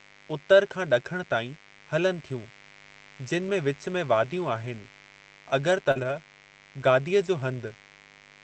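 A steady, raspy buzz sits under this speech recording from start to finish, roughly 30 dB below the talker. This is mains buzz built on 50 Hz. A dimmer, rectifier or unshielded cable lets in sharp switching spikes twice per mains cycle, and their harmonics stack up well above the 50 Hz fundamental into the kilohertz range. That is why it sounds gritty rather than like a smooth hum.

At 5.91 s a brief smear lasting about 40 ms marks a short concealed packet loss. That slice of audio never reached the decoder in time, so the receiver extended the preceding sound to cover the hole and then blended back into the real signal.

Running on from 5.95 to 6.17 s, the sound turns rougher and noisier. This is a lost packet rebuilt from error correction. About 120 ms of audio, which fits six 20 ms packets, was replayed from the low-bitrate backup copies that Opus tucks into each following packet. Because of this there is no gap, but the quality is coarser. 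The Opus call path limits the band to 8 kHz.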